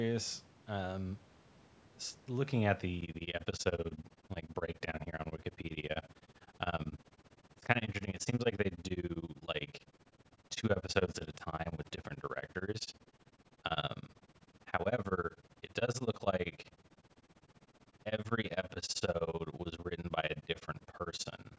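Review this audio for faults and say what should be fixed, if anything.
From 3.01 s to the end, the speech has a rough flutter, its level pumping around 15 times a second by about 60 dB. That is overlap-add ripple: windowed frames rejoined with an overlap not summing to constant gain. Choose window and hop pairs that sum flat.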